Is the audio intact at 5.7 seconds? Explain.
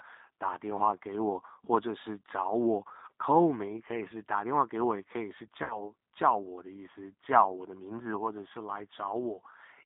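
No. From 5.64 to 5.88 s the sound is stretched out and fades, and stays weak or distorted after it. This is VoIP packet loss concealed by the speech codec. About 60 ms of audio went missing, which fits two lost packets. The decoder kept extrapolating its last pitch and filter, lowering the gain frame by frame, and took a while to recover once packets resumed.

Around that moment, as through the whole clip, the speech also sounds slightly rough and synthetic, confined to roughly 300 Hz to 3.7 kHz. That is the G.729 codec, heard plainly here. Its damage points to an 8 kbit/s G.729A link rebuilding speech from a vocal tract filter, a pitch predictor and a few pulses per frame.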